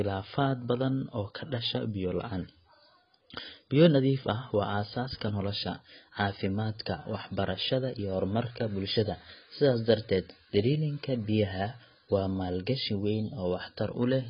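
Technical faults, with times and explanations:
Throughout, AAC compression: the speech is band-limited with nothing above 5 kHz, leaving it dull, and sibilants and sustained vowels carry a warbling, fizzy smear. This is likely from a low-bitrate AAC-LC encode, heavy damage of the kind that fits roughly 16 kbps. The encoder has lowered its cut-off to save bits and coarsely quantised the remaining frequency lines frame by frame, leaving spectral holes and noise-filled bands that shift audibly over time.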